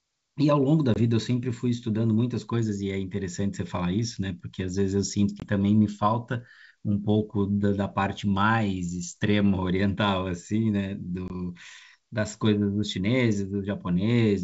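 At 0.94–0.98 s, 5.40–5.45 s and 11.28–11.30 s, packet loss on an ADPCM call cuts out about 20 ms each time, roughly a single packet. On the waveform, each gap is a flat, hard-edged hole, and on the spectrogram a blank vertical stripe across all frequencies. The speech resumes slightly distorted while the receiver's predictor and step size resynchronise with the sender's.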